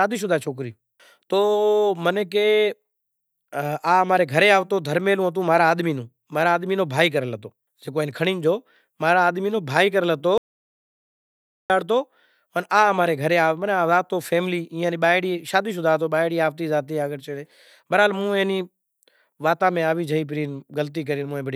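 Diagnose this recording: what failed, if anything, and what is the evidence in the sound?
An audio dropout to silence runs from 10.38 s to 11.70 s. Speech cuts off mid-flow, then 1.32 s of silence with no room tone until the signal returns. Likely the input device or link dropped while the recorder kept writing zeros.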